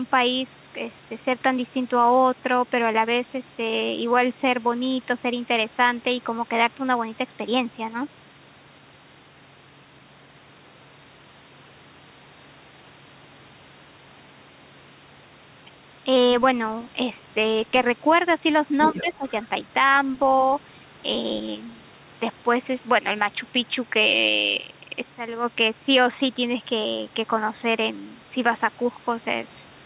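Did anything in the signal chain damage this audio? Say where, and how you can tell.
Yes. The damage sits in the call processing stage, most likely in the echo canceller, which let through part of the far end's voice from the loudspeaker. From 18.8 to 19.03 s a second voice can be heard underneath the talker, roughly 10 dB quieter. That residue is the other side's voice leaking through. The canceller's model of the loudspeaker-to-microphone path did not match the real echo closely enough to cancel it.

The same stage also produced speech suppressed in double talk. From 18.94 to 19.25 s, overlapping the leak, the talker's own voice dips by up to roughly 10 dB, for about 300 ms in total, then recovers. Both sides were talking at once, and the suppressor could not separate near-end speech from echo. It pulled the level down across the board. The drop coincides with the leaked voice and does not come from the talker, which points to the suppressor.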